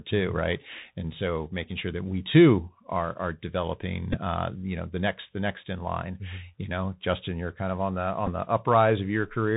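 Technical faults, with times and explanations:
Throughout, Bluetooth CVSD headset codec: the link codes each sample as a single up-or-down bit with an adapting step, which fits a 64 kbps stream. Nothing above 4 kHz survives, loud high sounds overrun the step and distort, s sounds turn scratchy, and a granular hiss sits underneath.
4.13 to 4.20 s and 8.27 to 8.29 s, Bluetooth headset packet repeated: packets between headset and phone were lost, and the chip re-decoded the previous packet's bits, covering about 11.2 ms each time, which fits three lost packets. Each repeat every 3.75 ms gives a short buzz near 267 Hz. The first falls after "too are are developing" and before "uh you know the".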